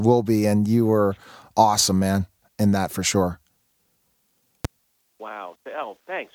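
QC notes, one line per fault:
4.65–4.67 s, loud pop: a single sharp crack sits on top of the speech for about 24 ms, peaking roughly 10 dB above it, while the talking carries straight on underneath without a gap. The short, hard-edged shape points to a sudden voltage step or spike entering the chain, likely from a switch, a static discharge, a plug being disturbed or a driver glitch, with the following circuitry rounding it into one brief thump.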